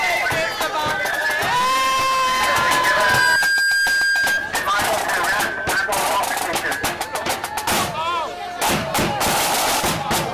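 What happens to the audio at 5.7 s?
Nothing goes wrong at 5.7 s; the audio plays through that moment intact, with no break, glitch or other fault.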